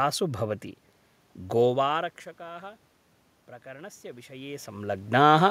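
From 3.62 s to 4.97 s the automatic gain rising fault appears: the input level falls by about 21 dB, and the gain control responds by slowly raising its gain about 4 dB, so the voice and the room noise behind it swell together over that stretch.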